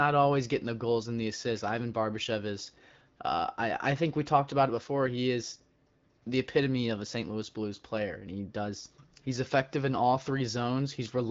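No technical faults are audible.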